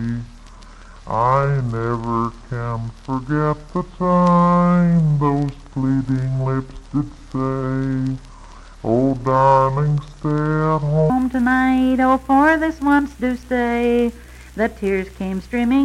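From the start to 11.10 s the audio is a section at the wrong speed, running at 0.614 times its recorded rate. Pitch drops with it, roughly ten semitones, so everything sounds deep and sluggish, likely from playback against a mismatched clock.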